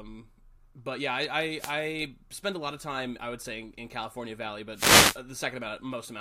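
At 1.58 s, between "but yeah I" and "spend a lot of", a short swish of static sweeps over the speech for about 0.15 s. A longer burst follows from 4.73 to 5.19 s, hissing across the voice. Both are wireless microphone noise hits: the analogue FM radio link faded as reflected signals cancelled the direct one, so receiver noise surged up.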